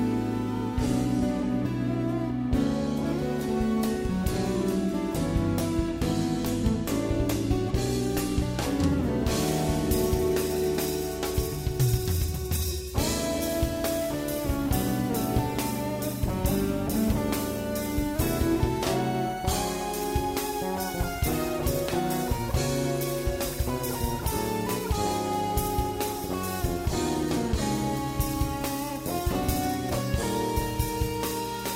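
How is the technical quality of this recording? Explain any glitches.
Nothing here needs explaining; I didn't hear any glitches at any point in the recording.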